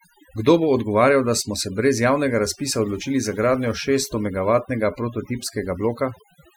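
A speech recording with overdone noise removal running from start to finish. The noise reduction was pushed too hard, so any frequency band that sits close to its idea of the noise gets pulled way down or switched off entirely. You can hear it in the gaps: the background drops away with little twinkling specks left behind, and quieter parts of the voice get stripped along with the noise.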